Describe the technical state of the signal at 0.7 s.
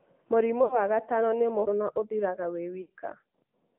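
Lost AMR speech frames cover 0.64 to 0.80 s, so 0.7 s falls inside the gap. The decoder had no valid frames here and kept repeating its last good pitch and vocal tract settings while lowering the gain. The sound stretches into a smeared, droning tail that fades toward silence, then returns thin and rough for a moment. The roughly 60 ms of concealment fits three consecutive 20 ms frames dropped on the radio link.

The AMR narrowband mobile codec shapes this moment as it does the whole clip. The line passes only about 150 Hz to 3.5 kHz, so everything above is missing. The codec rebuilds speech from a vocal tract model excited by a few pulses per subframe, which leaves a plainly buzzy, synthetic edge. That degree of damage points to a higher mode around 10 kbps.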